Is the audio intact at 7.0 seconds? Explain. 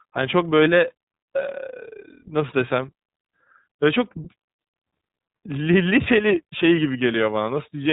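No. At 7.0 s the speech carries iLBC codec damage, present across the whole clip rather than only at that moment. Nothing above 3.8 kHz passes, so sibilants and consonant edges sound dull and narrowband. The codec rebuilds each frame's excitation independently of the previous one, consistent with 30 ms frames at roughly 13 kbps. That frame-by-frame coding gives the voice a plainly audible rough, slightly synthetic texture.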